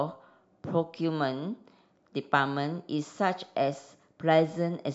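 No technical faults are audible.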